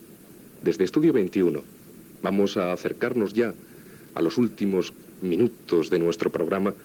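No technical faults can be heard in this audio.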